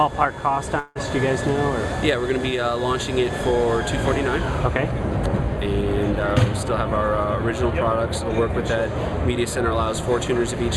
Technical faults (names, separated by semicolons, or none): long network dropout